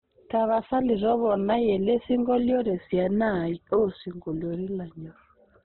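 Heavy Opus compression, likely at a very low bitrate around 12 kbps, squeezes this speech throughout into a narrow band with nothing above 4.1 kHz, leaving it muffled, rough and grainy.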